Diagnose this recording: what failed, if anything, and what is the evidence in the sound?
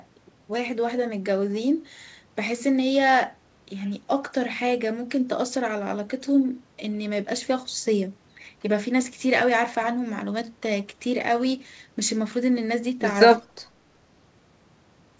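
The failure sits in call processing. From 13.39 to 13.5 s, the speech level drops sharply, by roughly 20 dB at its deepest, for about a tenth of a second, then recovers. The pattern matches speech suppressed in double talk: with both ends active, the echo canceller likely could not tell near-end speech from loudspeaker echo and attenuated everything. The band limit at 8 kHz, consistent with a wideband call codec, is the path's normal behaviour and not part of this fault.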